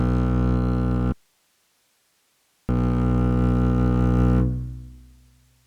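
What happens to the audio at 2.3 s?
At 2.3 s the music is in the middle of an audio dropout to a faint residue, running from 1.12 s to 2.69 s. The signal was likely lost upstream while the rest of the chain stayed live, so about 1.57 s of music vanishes abruptly rather than fading. What remains in the gap is only hiss, sitting far below the music's normal level, roughly 45 dB down, before the music snaps back in.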